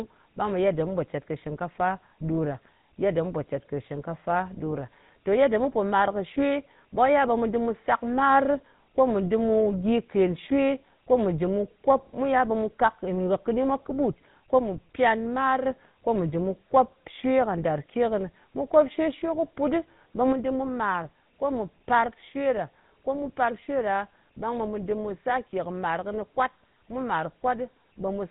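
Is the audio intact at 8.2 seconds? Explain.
No, the GSM full-rate codec runs through the whole clip, so 8.2 s sounds buzzy and gravelly from the coarse pulse excitation, with nothing above 3.8 kHz.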